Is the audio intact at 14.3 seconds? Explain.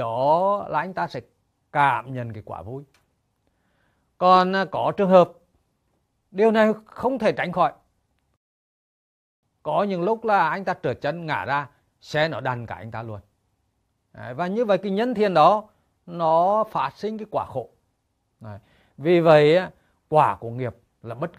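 Yes, at 14.3 seconds the audio runs through intact, with no dropout, click, distortion or other fault to be heard at that moment.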